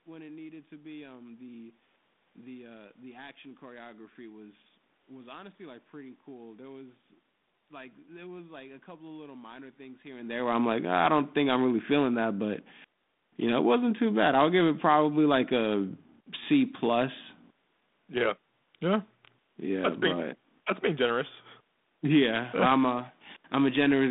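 No technical faults are audible.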